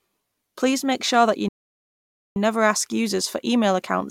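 A playback stall runs from 1.48 to 2.36 s: after "make sure that you" the speech cuts to silence for about 0.87 s, then resumes with "never ask users for". The break lands mid-phrase with no fade, and the speech continues as if nothing had happened. The likely cause is the player running short of buffered audio, or its output thread being held up, so nothing reached the output until data flowed again.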